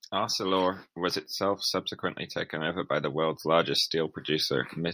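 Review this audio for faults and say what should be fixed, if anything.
No faults are audible here; nothing needs fixing.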